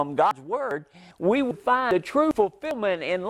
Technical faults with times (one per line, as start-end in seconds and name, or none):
0.31 audio missing between chunks
0.71 audio missing between chunks
1.11 audio missing between chunks
1.51 audio missing between chunks
1.91 audio missing between chunks
2.31 audio missing between chunks
2.71 audio missing between chunks